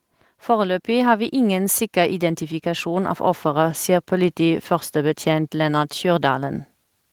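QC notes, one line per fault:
0.6 to 3.87 s, automatic gain rising: the level climbs steadily by about 6 dB over roughly three seconds, with the speech and the background noise floor swelling together rather than the voice alone getting louder. That shared rise shows the gain stage itself turning up as the control loop responds to an input it judged too quiet. The slow ramp reflects its long release, and the level settles just before "sier politiførstebetjent".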